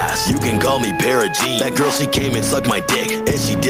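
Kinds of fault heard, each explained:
Gain pumping: The level is pulled down as each loud sound arrives, so the level breathes for the whole clip. The swing is around 5 dB, and loud and soft passages sit unnaturally close together, giving a squashed, flattened dynamic. The likely cause is input gain set far too high, with a fast limiter or compressor clamping down on every peak and releasing in the pauses.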